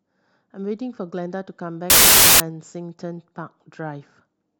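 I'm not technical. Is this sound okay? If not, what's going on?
No. Samples built from the wrong bytes, 1.90 to 2.40 s: the player assembles each sample's bytes wrongly, so the speech turns into loud hiss.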